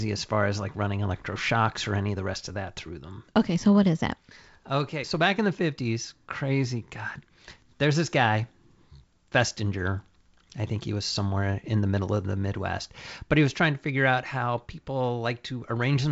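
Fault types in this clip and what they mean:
The speech comes through G.722 wideband telephone coding at 56 kbit/s, with content reaching up to about 7.7 kHz and nothing above it, and only the light coding noise expected from that codec at this rate.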